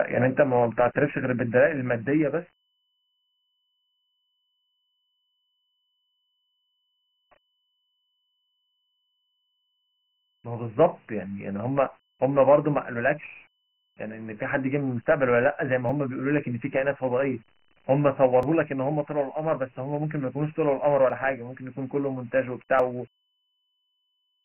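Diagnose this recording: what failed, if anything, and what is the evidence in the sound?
Codec stage: the speech has been stored as Dialogic VOX ADPCM, heavily damaged, with a gritty hiss riding on every syllable. A spectrogram shows nothing above 3 kHz across the whole clip; a 24 kbps rate points to 6,000 samples per second with 4-bit steps.

Driver or buffer stage: a jump in the sound at 15.89, 18.43, 21.10 and 22.80 s, likely dropped buffers from an overrun. About 10, 10, 20 and 30 ms go missing with no silence. The waveform shows abrupt joins, and the spectrogram shows thin vertical broadband lines.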